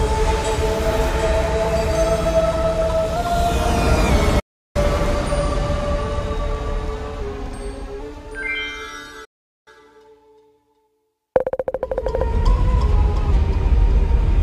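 Digital broadcast dropouts at 4.39–4.76 s and 9.25–9.68 s cut the audio to silence within about 8 ms for roughly 0.35 s and 0.42 s, as the receiver mutes on lost or corrupt frames. A drift correction step at 7.22–8.01 s slows playback 6.5% and drops pitch about 116 cents, then snaps back, and another at 12.48–13.32 s speeds it 6.5% and raises pitch about 108 cents, likely from clock-matching software adjusting its buffer.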